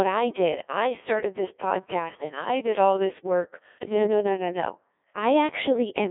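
From start to finish, the speech carries the sound of the Codec 2 vocoder. The band is narrow, roughly 300 Hz to 3.6 kHz, like a radio link. Nothing of the original waveform survives. The decoder rebuilds the voice from sine waves, driven only by pitch, voicing, energy and a rough spectral shape. The result is robotic and buzzy throughout. The damage is heavy, which fits a very low rate of about 1.6 kbit/s.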